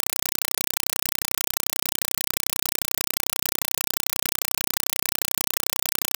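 From start to finish, a Dolby Digital (AC-3) bitstream is being passed through as if it were ordinary PCM samples, so a compressed stream is played as audio instead of being decoded. Each coded frame becomes a 4.0 ms blast of noise followed by silence, repeating at 31.25 Hz, a pattern that fits a 192 kbps stream. The speech is gone entirely, replaced by harsh, very loud chattering static.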